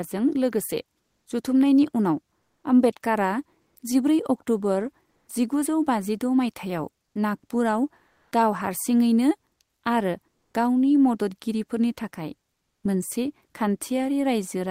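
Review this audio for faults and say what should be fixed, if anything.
Comfort noise in place of the background fills seven pauses, at 1.01, 2.39, 3.61, 5.09, 7.07, 8.07 and 10.35 s, each 80 to 240 ms. Faint room tone becomes flat synthetic hiss, shifting up to about 7 dB, likely from Opus DTX. Disable DTX at the sender.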